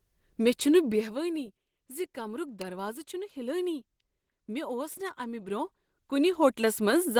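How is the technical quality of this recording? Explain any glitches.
The technical quality is compromised: the speech carries steady coding damage, one sharp snap, and a zipping passage near the end.

Throughout, the speech sounds muffled and hoarse. That is likely Opus compression in its hybrid speech mode, at a low rate around 16 kbps.

At 2.62 s there is a single sharp snap laid on top of the speech, likely an electrical switching spike from a nearby switch or discharge coupling into the line.

From 5.42 to 6.93 s, a fine ticking zips along the sound. This is zipper noise: a level change of about 15 dB is applied in steps, roughly 200 per second, with no smoothing.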